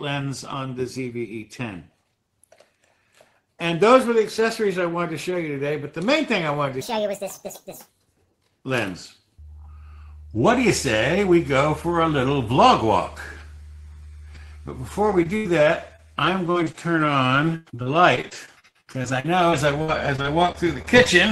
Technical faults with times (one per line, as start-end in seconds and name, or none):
6.81-7.89 section at the wrong speed
15.11-21.07 repeated packet loss (robotic sound)